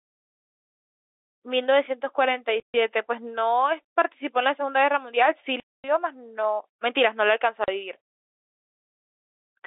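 Packets were lost in transit three times, and the receiver filled each gap with silence: at 2.60 to 2.74 s (140 ms), at 5.60 to 5.84 s (240 ms), and at 7.64 to 7.68 s (40 ms). All three lengths fit whole multiples of 20 ms packets. The speech drops abruptly to nothing and resumes just as abruptly, with hard edges. The line itself is G.711 telephone coding, with its narrow telephone band.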